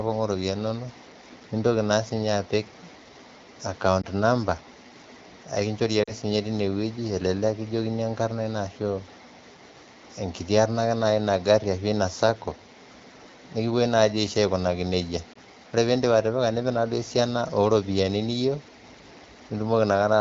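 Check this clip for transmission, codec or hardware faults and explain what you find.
Three brief dropouts stand out in the speech, all from the same transmission fault, heard over a wideband AMR-WB signal that points to about 12.65 kbit/s with light coding damage.

Lost AMR speech frames occur at 4.01 to 4.06 s, 6.03 to 6.12 s, and 15.33 to 15.38 s just before "ore piindip". Each gap fits one or two corrupted 20 ms frames. The decoder bridges each one by repeating the last good pitch and vocal-tract settings at falling gain, so the single-frame losses are heard as a short dip or warble and the two-frame run at 6.03 s sinks toward near silence, with the voice briefly weak or rough as it resumes.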